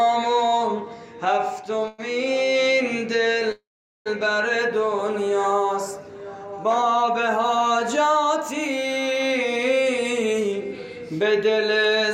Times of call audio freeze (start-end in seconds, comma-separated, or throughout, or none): 1.88-2.00, 3.52-4.08